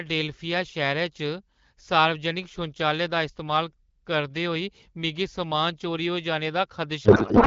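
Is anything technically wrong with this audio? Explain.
Yes. From 7.05 s to the end at 7.47 s there's a codec payload misread: garbled, warbly noise that barely tracks the speech, which fits octet-aligned AMR frames being unpacked as bandwidth-efficient. The AMR wideband (HD Voice) coding before that sounds like a mid rate around 12.65 kbit/s, with light codec wear.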